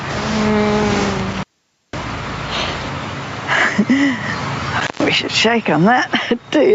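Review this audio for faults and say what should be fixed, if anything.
Gain pumping throughout: the background swells in pauses and ducks under loud moments by around 15 dB, likely from input gain set far too high, with a fast limiter repeatedly clamping it.

Intermittent contact at 1.31–2.04 s and 4.80–5.07 s: a loose connection opens, leaving crackly dropouts of about 0.5 s and 135 ms before the line reconnects.

To prevent these, lower the microphone's input gain so the limiter rarely engages, and reseat or replace the cable and plug before recording.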